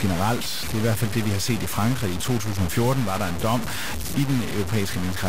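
From start to finish the speech is coated in grainy, gritty distortion that shifts with every syllable, with the error sitting only about 10 dB under the signal. That's likely low bit depth without dither, around 3 bits and truncated, so quiet tails sputter out.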